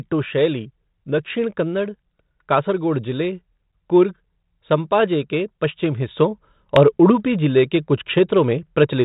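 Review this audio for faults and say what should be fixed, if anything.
At 6.08 s, right after "कुर्ग संपाजे के पश्चिमी", there is a sudden gain jump. The speech and the background noise both step up by about 5 dB, and they stay louder to the end of the clip. The level changes from one sample to the next with no ramp. The likely cause is a digital gain setting applied instantly. The band stops near 3.8 kHz throughout, as expected for telephone ADPCM. To prevent this, apply any gain change with a short fade.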